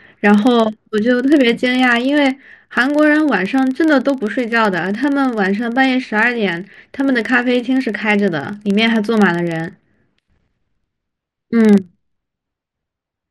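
A filter restarted on every block runs through the whole of this speech recording, heard as a steady buzz of about 23.4 Hz that rises and falls with the level of the speech. Each processing block starts again from silence and leaves a small tick, a rate that fits a 2048-sample block.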